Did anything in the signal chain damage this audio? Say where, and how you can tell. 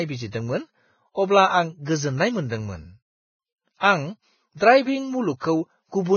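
Yes, at the codec stage: likely heavy Vorbis compression throughout, consistent with roughly 15 kbps. Nothing above 6.6 kHz survives, and the remaining treble is quantised into grainy hiss with smeared speech onsets.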